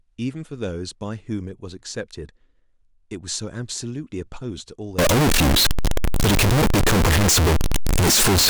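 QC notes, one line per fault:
4.99–8.50 s, float read as integer: speech turns very loud and harsh, near-square at an almost fixed, high level, with background noise as loud as speech. Likely 32-bit float samples read as 32-bit integers.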